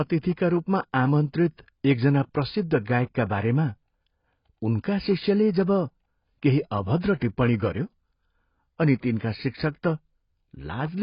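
From the start, the speech sounds dull and smeared, with nothing above 5.1 kHz. This is likely heavy AAC compression, fitting a bitrate near 16 kbps.

From 7.19 to 7.22 s, just before "टिप्पणी गऱ्यो", there is pre-echo. Codec noise spreads 29 ms ahead of an attack, heard as a brief hiss before it.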